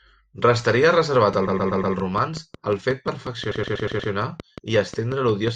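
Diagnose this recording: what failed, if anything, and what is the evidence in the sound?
A train of clicks runs from 0.97 s to 5.49 s: about twenty near-identical pulses at a steady 5.5 per second, peaking about 5 dB above the speech and audible in the pauses too. The even spacing and constant shape point to something outside the audio injecting a pulse on a fixed cycle, likely interference from nearby equipment coupling into the analogue wiring, or a faulty connection or power supply.

Repeated frames appear twice as a stutter. From 1.47 s to 1.95 s, a 120 ms block plays four extra times, adding 480 ms. From 3.51 s to 4.11 s, the same-length block plays five extra times, adding 600 ms. This points to the codec, storage or network stage, where a short run of compressed frames, fitting about six frames, was written or sent again and decoded each time.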